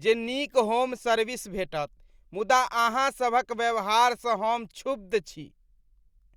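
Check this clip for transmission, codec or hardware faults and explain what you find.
Nothing in the speech points to a transmission, codec or hardware fault; no action needed.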